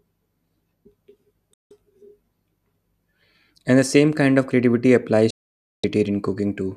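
A digital broadcast dropout mutes the speech at 1.54–1.71 s and again at 5.30–5.84 s. Frames were lost, so the sound cuts abruptly to silence and that material is lost.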